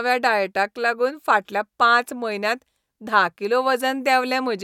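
No technical faults can be heard anywhere in the recording; the speech signal stays continuous and stable throughout.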